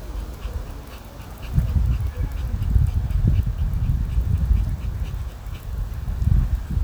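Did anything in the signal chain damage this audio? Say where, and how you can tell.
No, nothing in the signal chain damaged this audio.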